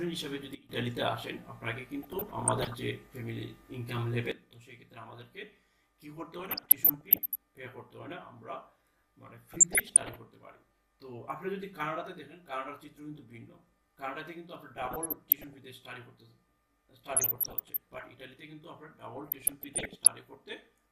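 A sudden gain jump at 0.55 s drops the sound and its background noise together by about 17 dB until 0.69 s, likely a gain setting applied without a ramp. DAB burbling follows from 2.02 to 2.76 s. Bit errors slip past the error correction and corrupt samples in individual sub-bands, giving short blips of noise in single sub-bands over the audio. At 4.32 s a second gain jump cuts the level by about 13 dB, and it stays down to the end. The burbling returns at 6.39 to 7.35 s, 9.53 to 10.18 s, 14.77 to 15.58 s, 17.10 to 18.09 s and 19.16 to 20.14 s, each burst pointing to a bit error rate of well under one percent.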